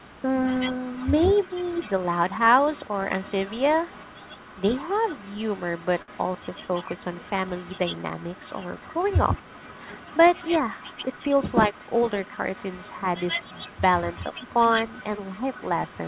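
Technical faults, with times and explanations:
0.0–0.1 s and 0.56–16.1 s, echo leak: a delayed copy of the sound trails the original. It starts very faint, about 35 dB down at 183 ms, then about 15 dB down at 140 ms. It is likely loudspeaker pickup that the far end's echo canceller failed to remove.
6.02–6.11 s, short stall from a late packet: a packet arrived late and the jitter buffer ran dry. The receiver held the last sound for 59 ms until the packet arrived, so nothing is lost, but that sound drags and the delay grows by 59 ms.
11.26–12.02 s, jitter buffer speed-up: with too much audio queued, the receiver repeatedly cut short pitch-period pieces, about 70 ms in total. Playback runs at 107% speed with unchanged pitch, so this stretch sounds slightly hurried.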